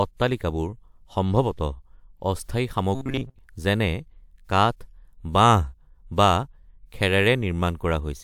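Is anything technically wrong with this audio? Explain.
Yes. From 2.95 to 3.39 s the speech turns into a rigid metallic buzz at 133 Hz, a robotic sound from repeated short buffers. Audio likely arrived too seldom, so a chunk of about 7.5 ms looped through most of that stretch. A spectrogram shows flat, evenly spaced harmonics, and the waveform shows identical repeating cycles.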